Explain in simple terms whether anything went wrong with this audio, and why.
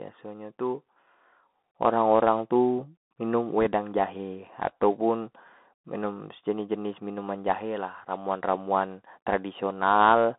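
Bluetooth CVSD headset codec, throughout: the speech passed through a phone-quality headset link that keeps only roughly 200 Hz to 3.6 kHz, so it sounds thin and muffled, with scratchy s sounds and a grainy hiss underneath.

Bit errors on a Bluetooth voice link, from 3.61 to 3.67 s: a small share of the transmitted bits flipped, adding a brief rushing crackle rather than a sharp click.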